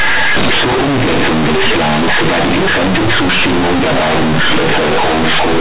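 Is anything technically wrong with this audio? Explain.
Yes, and it's obvious from the start. For the whole clip, this is companded audio read as linear: mu-law bytes are played as plain 8-bit samples, so the speech becomes loud, buzzy distortion with heavy noise in the pauses. The G.711 telephone coding itself is fine.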